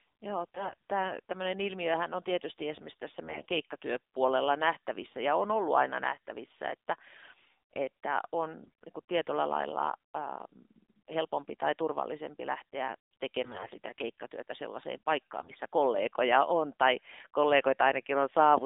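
Throughout the speech, the AMR narrowband mobile codec confines everything to roughly 200 Hz to 3.7 kHz. Its synthetic, buzzy edge fits a low mode near 7.4 kbps. A spectrogram shows a hard ceiling below 4 kHz with nothing above, and the harmonics look smeared.

AMR bit errors strike at 0.44–0.90 s, 3.24–3.49 s, 8.62–8.70 s, 13.44–13.76 s and 15.40–15.59 s. Flipped bits in the weakly protected part of each frame misplace the excitation pulses and skew the fine gain and spectral values. Pitch and level roughly hold, but the speech turns hoarse, scratchy and gargly. On a spectrogram, clean harmonics dissolve into noisy, speckled energy. The waveform envelope stays about the same, while its fine structure turns ragged.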